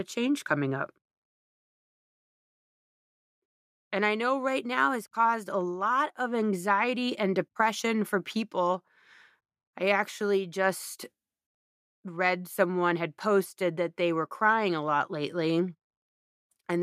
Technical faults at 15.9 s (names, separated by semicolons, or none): none